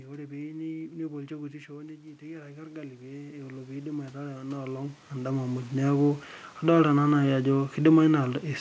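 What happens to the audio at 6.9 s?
Nothing goes wrong at 6.9 s: the audio is intact at that moment, with no dropout, glitch or other fault.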